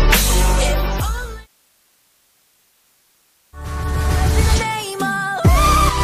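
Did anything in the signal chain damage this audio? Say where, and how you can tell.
Yes: low bit depth with dither throughout, from sample-format conversion. A constant, even hiss roughly 40 dB below the sound, without distortion, fits dithered rounding to 9 bits.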